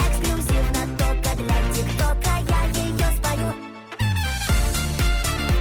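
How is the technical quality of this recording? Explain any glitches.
Quality drops audibly partway through. Adaptive stream at a lower bitrate, from 0.81 s to the end: the player switched to a leaner encoding, roughly 64 down to 24 kbit/s Opus, so codec artefacts rise, abruptly and without any gap.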